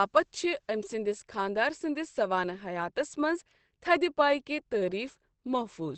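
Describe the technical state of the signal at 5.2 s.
At 5.2 s the speech carries the same damage it has from start to finish: likely Opus compression. The band stops dead around 8.5 kHz, and the top end sounds muffled with a hoarse edge. That fits the codec's speech-oriented mode at a low rate, somewhere near 16 kbps, where it narrows the bandwidth and approximates the voice rather than keeping fine detail. The codec damage is plainly audible here.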